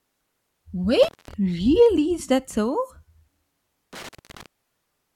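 At 1.03 s the speech drops out for roughly 0.2 s, with crackle marking the break and the return; the disturbance spans 1.03 to 1.34 s. The same intermittent contact recurs from 3.93 to 4.46 s, open for about 0.21 s. A loose plug or cable briefly loses connection, so the signal vanishes and only faint hiss remains. On a waveform each gap shows as a near-flat stretch bounded by sharp spikes; a spectrogram shows vertical broadband streaks at the edges around a dark band.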